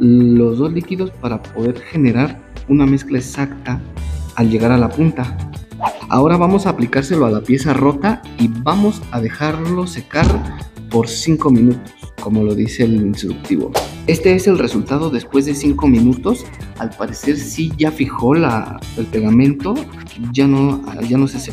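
Nothing in the audio stood out as a fault on listening.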